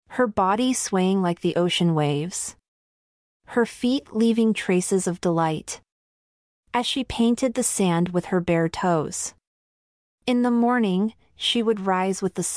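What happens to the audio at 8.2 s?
Nothing goes wrong at 8.2 s; the speech runs on intact through that moment, with no dropout, click, distortion or other fault to be heard.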